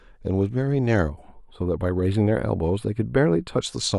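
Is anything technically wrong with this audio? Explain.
Yes. From about 1.10 s to 3.61 s the speech picks up channel delay (comb filtering). One channel runs a few samples late, about 0.07 ms, and when the two get summed to mono the shared content cancels at evenly spaced frequencies. With a delay that short, the first notch lands up around 7 kHz, so the top end thins out and the speech turns a bit dull and phasey until it clears.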